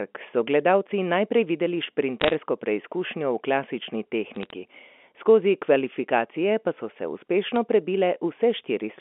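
A speech clip over a telephone-band G.711 line with bit errors on a digital phone line: flipped bits give sharp ticks and crackle around 2.21–2.34 s, 4.34–4.50 s, and at 7.56 s just after "so se".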